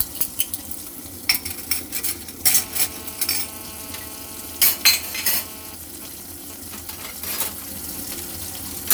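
From 2.54 to 5.75 s, GSM phone buzz from a nearby handset in a call: rectified 217 Hz radio bursts give a raspy buzz about 18 dB below the sound, drawn as evenly spaced harmonic lines on a spectrogram.

From 5.84 to 8.84 s, GSM signalling bursts as the caller falls silent: even ticks with a longer 217 Hz buzz twice a second, about 20 dB down, seen as clustered spikes in the waveform.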